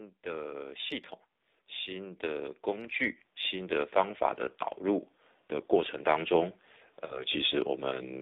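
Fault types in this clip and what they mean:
AMR narrowband mobile codec: The speech runs through a 2G/3G-style narrowband speech codec that models the vocal tract and excites it with sparse pulses. Audible band is roughly 250 Hz to 3.7 kHz, and the plainly buzzy, synthetic texture fits a low mode around 7.4 kbps.
Automatic gain rising: The level control judged the input too quiet and raised its gain gradually, so voice and background swell together. It rises about 4 dB from 0.22 to 1.02 s, then about 9 dB more slowly from 1.53 to 4.29 s.
Lost AMR speech frames: Around 7.06 to 7.23 s roughly 40 ms of speech data failed its checksum after radio errors, consistent with two 20 ms frames. The decoder reused its last pitch and vocal tract settings at falling gain, giving a drawn-out, fading sound before speech returns.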